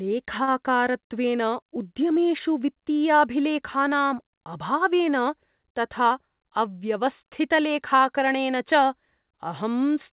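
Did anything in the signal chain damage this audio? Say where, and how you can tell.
Yes. From 0.44 to 0.49 s a sound is held 34 ms too long. This is a short stall from a late packet: the jitter buffer stretched sound until it arrived.

From 6.02 to 6.67 s the speech hurries at 108% speed with pitch unchanged. This is a jitter buffer speed-up, which trimmed about 70 ms of pitch periods to cut delay.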